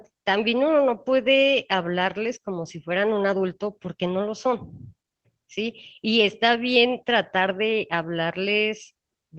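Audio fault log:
Nothing stood out on listening to this speech clip.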